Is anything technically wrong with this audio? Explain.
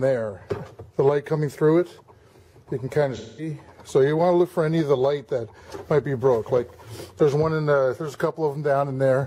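Yes. From 3.16 to 3.49 s there is AAC frame loss with concealment. For about 213 ms, consistent with a run of roughly five lost frames, the decoder resynthesises from the last good spectrum, producing a smeared, phasey stretch in place of the missing audio.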